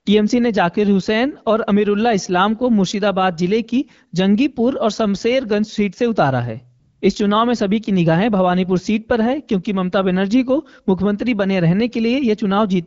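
From 6.79 to 7.01 s, about 220 ms, the background gives way to AMR comfort noise. The phone treated the gap in the speech as silence, stopped sending speech frames, and the receiver filled the space with a smooth synthetic hiss built from a rough estimate of the noise level and spectrum. Unlike a dropout, it doesn't go dead. Unlike a noise gate, the real ambience is swapped for a steadier, featureless texture rather than just muted. Around it, the wideband speech fits AMR-WB at about 12.65 kbit/s.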